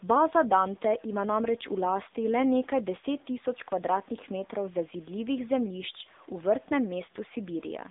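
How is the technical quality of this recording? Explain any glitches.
The quality is poor. The whole recording has come through a narrowband mobile phone path, and the damage is plainly audible.

AMR narrowband mobile codec, throughout: the voice sounds thin, boxed-in and buzzy, with a synthetic edge. Nothing is heard above about 3.8 kHz, and the lows fall away below about 250 Hz. The AMR-NB codec rebuilds speech from a vocal-tract model excited by sparse pulses. At the low bit budget here, which fits a rate near 8 kbit/s, that model adds the metallic buzz.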